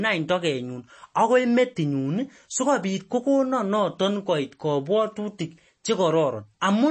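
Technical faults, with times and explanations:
Throughout, MP3 compression: the speech was likely encoded with too few bits, which fits about 32 kbps, so the encoder removed everything above 8.4 kHz and let weak frequency lines flicker between frames, leaving a dull, watery, swirly sound with smeared attacks.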